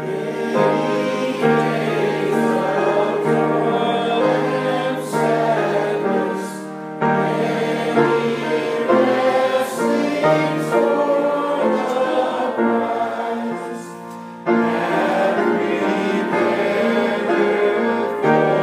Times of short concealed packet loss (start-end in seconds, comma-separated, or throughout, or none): none